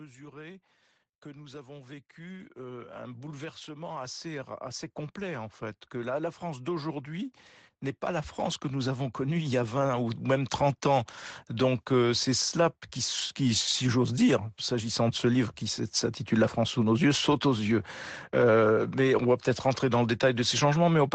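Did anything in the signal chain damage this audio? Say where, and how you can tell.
Yes. The damage sits in the call processing stage, where automatic gain rising occurs twice. From 1.22 to 7.39 s the level climbs gradually by about 14 dB. From 8.07 to 11.87 s it climbs again by about 7 dB, ending just before "euh c'est cela qui". The speech and the background swell together. That tells you the gain control judged the input too quiet and turned itself up. The call's microphone filtering shows as nothing above 8 kHz and a loss of the lowest bass, which is normal.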